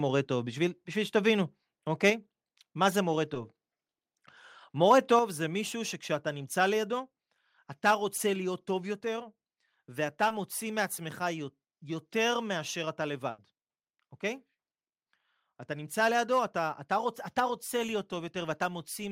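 A speech recording with three kinds of network and capture fault. Short concealed packet loss occurs three times: at 3.34 s, from 8.17 to 8.20 s, and from 10.28 to 10.31 s. Each time a small piece of audio failed to arrive in time. About 10 ms is missing at the first point and 20 ms at the other two. The receiver covered each hole by extending the preceding sound, then blended back into the real signal. Each one is heard as a brief smear or wobble in the speech. At 5.19 s the whole level drops abruptly, by about 5 dB. The speech and the background fall together in a single step, not a gradual fade. That pattern points to a microphone volume step-down, likely made by the call software when it judged the input too loud. From 13.30 to 13.39 s there is a burst of packet loss. About 80 ms of audio never arrived. The receiver held on to the last sound and let it fade across the gap. The result is a short held buzz or fading hiss. 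Then the speech picks up again further along, and the stretch in between is gone.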